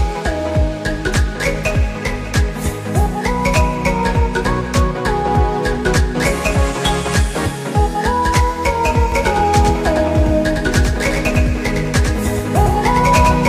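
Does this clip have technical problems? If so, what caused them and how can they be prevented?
Yes. From 9.12 s to the end, a doubled audio track appears: a second full-band copy about a tenth of a second late, roughly 5 dB quieter, with no room colour and an abrupt onset. It is likely being captured again through a slower parallel path. Prevent it by routing the source through a single capture path and muting any monitoring or loopback input.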